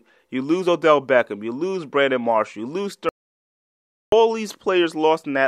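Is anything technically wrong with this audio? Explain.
Yes. From 3.09 to 4.12 s there is an audio dropout to silence: the speech cuts off mid-flow and about 1.03 s is lost, likely because the input dropped while silence kept being written. Unlike a natural pause, the gap holds no room tone.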